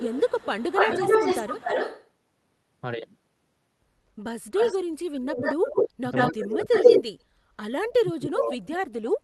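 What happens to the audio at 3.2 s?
Nothing goes wrong at 3.2 s; the speech there plays through intact, with no dropout, click, distortion or other audible fault.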